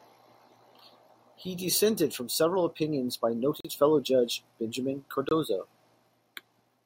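It's a speech clip with two brief dropouts where the sound cuts to silence and then carries on: one from 3.60 to 3.65 s, lasting 42 ms, and a shorter one from 5.29 to 5.31 s, lasting 23 ms. That pattern is likely a Bluetooth stall, with interference holding up packets long enough for the headphones' buffer to run empty, so playback just halts until the resent data turns up.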